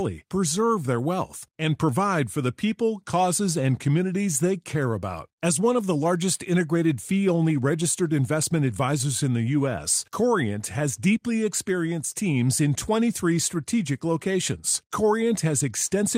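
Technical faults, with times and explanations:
No technical faults detected in the recording.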